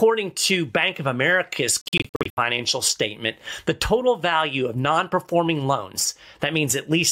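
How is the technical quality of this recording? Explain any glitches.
One glitch stands out. From 1.81 to 2.39 s, the sound stutters into brief silences, the longest about 70 ms. It is likely a Bluetooth dropout. Late packets were discarded, and playback skipped ahead.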